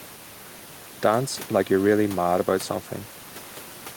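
No technical faults can be heard in this speech recording. The room's background noise sits about 21 dB below the speech, a normal part of the recording.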